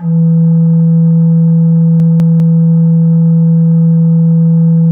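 Chunks out of order at 2.0 to 2.4 s: a 200 ms piece of the music plays one chunk late, swapping places with its neighbour, giving a jumbled moment with three hard joins.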